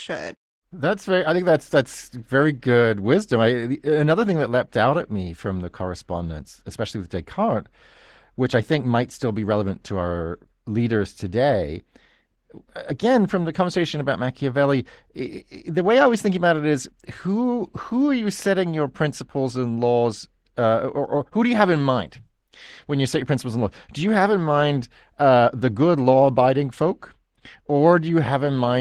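Opus voice compression affects the whole speech clip. The speech sounds hoarse and slightly robotic, with coarse detail. This fits a low bitrate near 16 kbps.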